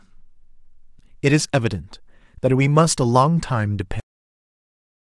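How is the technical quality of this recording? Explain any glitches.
The recording has one clear glitch, a cut-off end: at 4.00 s the speech stops mid-sound because the final buffers were never written, leaving abrupt digital silence with no decay, seen as a flat waveform and blank spectrogram.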